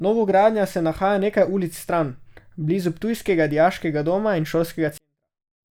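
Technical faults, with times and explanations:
4.98–5.70 s, 24-bit alignment error (too quiet): after "ptujskega dijaškega doma in" the speech falls about 48 dB instantly yet stays clean, unlike a dropout or fade. Samples sitting in the low 24 bits of 32-bit words are read as full 32-bit values.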